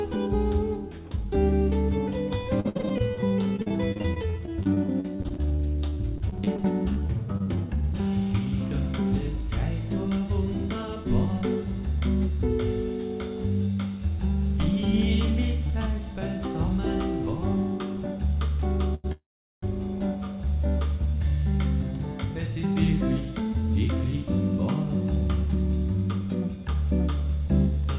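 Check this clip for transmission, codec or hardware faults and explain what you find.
Several faults from the network and jitter-buffer side of a call show up in this audio. Throughout the clip, nothing above 4 kHz comes through, which fits a G.711 A-law path at 64 kbps.

Repeated packet loss (robotic sound), 2.6 to 7.48 s: the receiver hits about 45 short holes, none longer than 57 ms. Each hole is bridged by extending the preceding sound. Concealment covers about 19% of the stretch and roughly 860 ms of real content is lost, so the sound turns choppy. It differs from the stalls later in the clip because material is actually missing, not just delayed.

Jitter buffer slow-down, 6.65 to 7.83 s: this overlaps the end of the loss burst. The buffer refills by repeating single pitch periods and bits of pauses, adding 96 ms. The audio plays at 93% speed with its pitch unchanged, so sounds are drawn out. 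A short stall holds one sound in a single spot. Here the repeats come many times in a row across the span.

Jitter buffer speed-up, 8.38 to 11.43 s at 103% speed, and 22.56 to 23.93 s at 107%: an overfull buffer is trimmed by cutting out pitch-period-sized slices, about a tenth of a second in each stretch. Both keep the same pitch, and the 107% stretch sounds hurried.

Short stall from a late packet, 18.95 to 19.06 s: one packet arrives late and the buffer runs dry. The last sound is held for 94 ms, then playback resumes exactly where it stopped, with nothing lost. It is far briefer than the freeze that follows.

Call audio freeze, 19.12 to 19.64 s: the sound holds as a fading buzz and then goes silent for about 390 ms. Playback then picks up where it left off, having inserted about half a second while skipping no content. The likely cause is packets held up in transit, which emptied the jitter buffer for much longer than the earlier stall.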